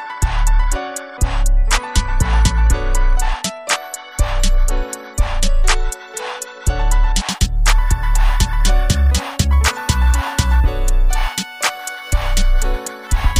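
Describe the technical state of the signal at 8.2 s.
At 8.2 s the signal is inside a stretch of crude rate conversion running from 7.29 s to the end at 13.40 s. Samples were simply repeated rather than filtered, which fits a 32 kHz to 44.1 kHz step. The patterned error sits only about 25 dB below the signal, adding a gritty, inharmonic fizz that tracks loud and high sounds.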